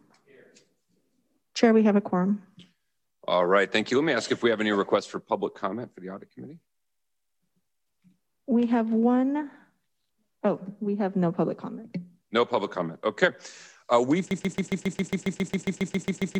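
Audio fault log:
14.31–16.39 s, broken-record loop: a fragment of about 136 ms repeats exactly, back to back, roughly 15 times, and the stutter runs to the end of the clip. The player, encoder or stream likely stalled and kept re-sending the last short chunk it held. Each pass is identical, which gives the mechanical, stuck rhythm, and the audio that should have played during those final two seconds is lost.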